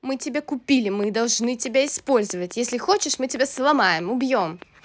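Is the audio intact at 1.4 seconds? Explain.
No. At 1.4 s the speech sits under a train of clicks running from 1.04 to 4.63 s, likely from electrical interference. Regular ticks come at 4.7 per second, show as evenly spaced broadband vertical stripes on a spectrogram, and peak about 5 dB above the speech.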